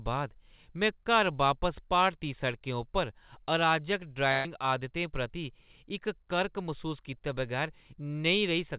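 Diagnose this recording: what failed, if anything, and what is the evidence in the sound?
Network stage, burst of packet loss: from 4.32 to 4.47 s the last sound is stretched and faded for about 125 ms rather than going silent, and roughly 120 ms of speech is skipped.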